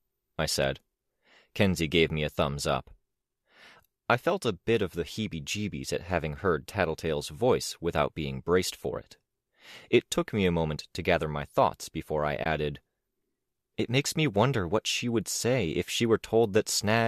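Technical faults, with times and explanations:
12.44–12.46 s, AAC frame loss with muting: right after "my thoughts before I" the sound drops into a brief soft-edged gap of about 20 ms, which fits two lost low-delay frames. The decoder zeroed them and the overlapping windows faded out and back in.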